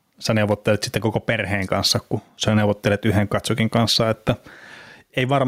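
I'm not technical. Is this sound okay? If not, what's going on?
No. Gain pumping runs through the whole clip. Loud and soft parts end up closer in level, and the sound is squashed. Likely cause: microphone level set too high, with a limiter squashing it.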